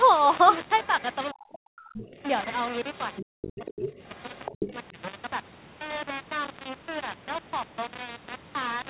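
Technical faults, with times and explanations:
Throughout: low bit depth without dither. A grainy, rough distortion sits on the speech the whole way through and changes character with the voice, getting harsher on quieter syllables. The quantisation error is tied to the signal and sits only about 10 dB under it. That fits a coarse grid of roughly 5 bits with plain rounding and likely no dither. Steady hiss would stay the same whatever the speech did, and this distortion does not, because it follows the signal. The call path's 4 kHz band limit is audible too, but that is normal for this codec.
0.84–1.15 s, 1.98–2.22 s, 2.94–3.25 s, 3.42–4.73 s: other side's voice leaking through. A second, fainter voice breaks through in short scraps, with one longer stretch from 3.42 s. It is about 20 dB below the main talker at first, then about 15 dB, then about 10 dB in the later two. The likely cause is an echo canceller that left part of the far end's loudspeaker sound in the microphone signal. 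The sound is a separate voice layered over the talker, not a change to the talker's own speech.
1.32–2.18 s, 3.27–3.88 s, 4.53–4.97 s: speech suppressed in double talk. In each span the main voice dips or drops out in pieces, by as much as about 40 dB in the first two and about 30 dB in the third. Together these dips add up to roughly a second, half a second and a third of a second. Each one overlaps the leaking far-end voice. The canceller likely could not separate near from far speech and turned everything down. A network dropout would hit regardless of what the other side was doing, but these gaps line up with it.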